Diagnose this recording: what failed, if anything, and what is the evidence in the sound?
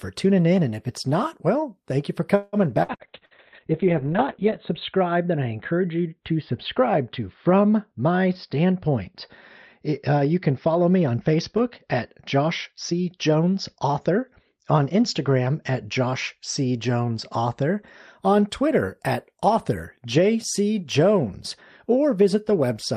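Network stage: repeated packet loss (robotic sound) from 2.35 to 3.34 s. Four gaps, the longest 174 ms, are patched by extending prior sound, giving choppy speech with pieces missing.

Codec stage: a call bitrate drop from 2.94 to 17.9 s. Opus falls from 32 to 6 kbps, and the bandwidth shrinks from 20 kHz to 4 kHz. Speech turns muffled and watery.

Buffer stage: a jitter buffer speed-up from 12.83 to 14.53 s. About 150 ms of pitch periods are cut, so speech runs at 109% speed without any pitch change.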